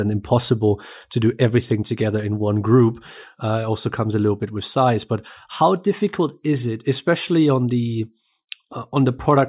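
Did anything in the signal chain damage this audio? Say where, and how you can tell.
No, nothing along the chain audibly damaged this speech recording, and the signal holds together without any break, distortion or added artefact at any stage.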